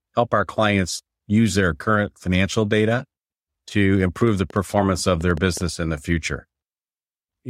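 From 4.21 to 5.62 s there's a train of clicks: about ten sharp, similar pops at roughly 5.7 per second, unevenly spaced and about as loud as the speech itself. It's likely interference from nearby gear or a faulty connection or power supply.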